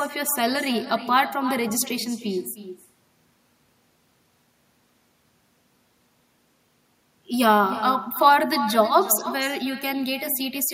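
From start to finish, the speech carries an echo with no canceller. Each phrase returns as a weaker copy, about 13 dB below the direct sound. It lags by roughly a third of a second. The far end is playing the call through a loudspeaker. Its microphone captures that playback and sends it back across the network. Nothing suppresses it. The returning copy sounds thin, trailing every syllable like a faint shadow.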